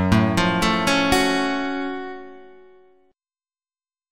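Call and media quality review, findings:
Adaptive stream at a lower bitrate from 1.47 s to end. Sudden, gapless loss of treble, nothing above 8.1 kHz, artefacts rise. Stream player switched renditions on a slowed connection. Sound fits MP3 falling from 128 to 32 kbit/s.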